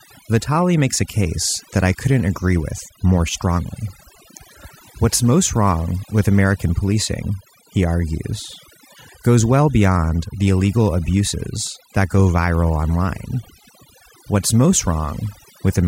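Overdone noise removal runs through the whole recording. The noise reduction stage was set far too aggressively, so any frequency band whose level sits close to its estimate of the background noise gets pushed down hard or switched off entirely. Quieter parts of the speech fall under that threshold and are removed along with the noise. The gaps between phrases drop to near silence scattered with twinkling specks.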